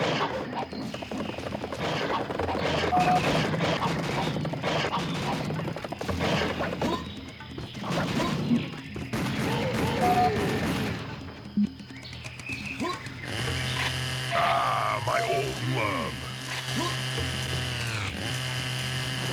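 No technical faults can be heard anywhere in the clip. The audio holds steady throughout, with nothing that breaks, drops out or shifts.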